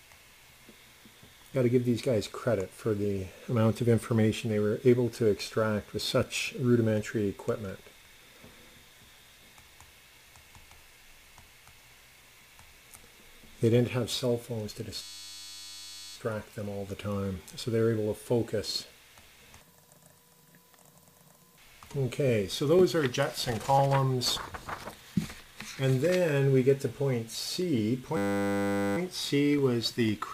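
Twice in this audio, the playback locks up into a flat, steady buzz, from 15.02 to 16.16 s and again from 28.17 to 28.97 s. That's a system hang loop: the machine or its driver stalled while the sound hardware kept replaying the same 10 ms chunk of its ring buffer. The chunk is so short that it repeats at 100 Hz and fuses into a tone rather than a stutter, which points to a small buffer.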